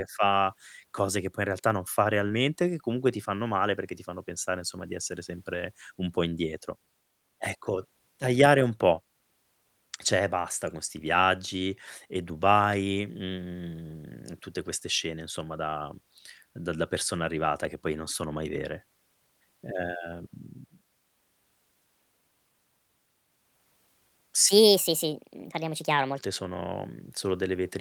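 At 2.27 to 2.31 s, between "in realtà non fa" and "che comunque ti fanno", there is a short concealed packet loss. About 20 ms of speech never arrived in time, and the decoder bridged the gap by extending the preceding sound, leaving a brief smear before the speech resumes.

From 24.49 to 26.18 s, a section at the wrong speed plays back 1.41 times faster, raising the pitch by roughly seven semitones so the speech sounds high and hurried. The likely cause is that this stretch was resampled or clocked at the wrong rate.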